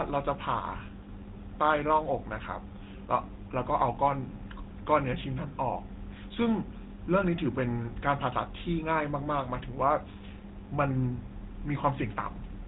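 GSM full-rate codec damage runs through the whole speech clip: a buzzy, gravelly roughness that comes from modelling the vocal tract and driving it with a regularly spaced pulse excitation, with only every third excitation sample kept. Nothing above about 3.8 kHz survives, which fits the 13 kbps GSM full-rate coder.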